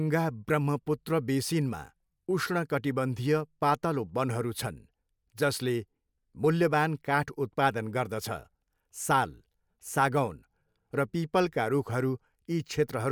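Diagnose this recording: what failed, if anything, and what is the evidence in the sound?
Nothing in this speech recording points to a failure at any stage, so there's nothing here to diagnose.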